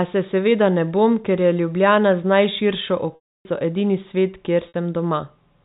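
At 3.15 s the speech breaks for 300 ms, and at 4.68 s for 60 ms: packet loss with pitch repetition. The receiver loops the last pitch period, so the short gap holds as a buzz. The long one fades to silence, then cross-fades back rather than clicking like a hard dropout.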